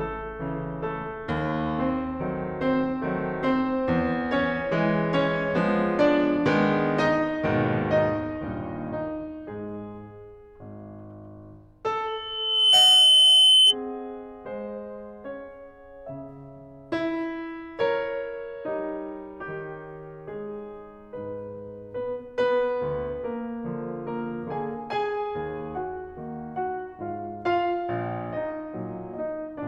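At 12.07 s a loudspeaker feedback squeal breaks into the music. A single tone at 3 kHz appears and swells quickly, reaching full strength in well under a second. It then sits at about 15 dB above the music, a piercing, steady whistle. The microphone is picking up the loudspeaker it feeds, and at 3 kHz the loop gain exceeds one, so that tone keeps reinforcing itself. The squeal stops at 13.75 s.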